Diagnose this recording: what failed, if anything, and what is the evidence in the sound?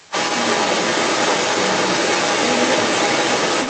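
A second voice runs under the speech for the whole clip, strong, around 10 dB up: other side's voice leaking through, likely residual echo after call-processing cancellation.

From 0.03 to 0.13 s the speech dips sharply, around 15 dB: speech suppressed in double talk, likely the echo canceller turning down both overlapping voices.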